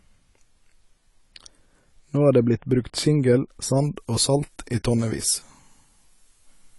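From start to finish the audio shows plainly audible codec damage, likely from AAC compression at a low bitrate, which fits AAC-LC near 32 kbps. Nothing reaches above 11.5 kHz, and the quantised spectrum leaves the speech sounding dull and smeared.

From 3.77 s to the end, pre-emphasis is left on: the treble boost applied before transmission was never reversed by its matching de-emphasis, consistent with a 50-microsecond FM curve. Highs sit about 10 dB up at 10 kHz relative to 1 kHz, making the speech thin, bright and sibilant.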